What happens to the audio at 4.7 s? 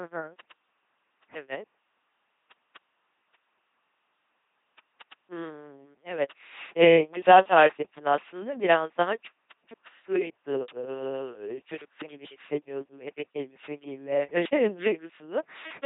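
At 4.7 s the speech carries the buzzy, robotic LPC-10 vocoder sound that runs through the whole clip. Each moment is forced to either a pulse-train buzz or noise through a simple filter, with nothing above 3.8 kHz. Word clock ticks are also present: sharp clicks about every 0.1 s from 0.14 to 15.8 s. An unlocked receiver slips one sample each time the clocks drift past each other, which fits a clock error of around 200 ppm.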